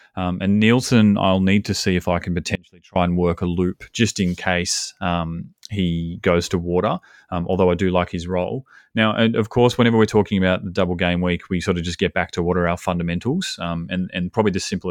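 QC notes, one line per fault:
2.55–2.96 s: audio dropout to a faint residue. The path likely lost the wanted signal for 405 ms but stayed live, so after "see if I can" the speech cuts abruptly to a faint sound roughly 30 dB down, snapping back at "and work a loop".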